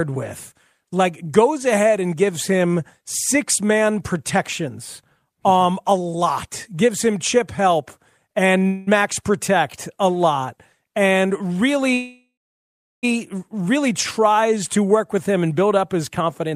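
At 8.59 s the speech briefly holds a sound about 16 ms too long, a short stall from a late packet: the jitter buffer emptied and the receiver stretched the last sound until the packet arrived. Two call audio freezes follow. From 8.67 to 8.89 s a buzz fills about 0.2 s. From 11.94 to 13.05 s a buzz fades into roughly 0.72 s of silence. In both, the audio then resumes where it stopped. The likely cause is delayed packets draining the jitter buffer. From 16.20 to 16.54 s the speech sounds hurried at unchanged pitch, running at 132% speed. This is a jitter buffer speed-up: the receiver cut out pitch-period pieces, about a tenth of a second in total, to reduce excess delay.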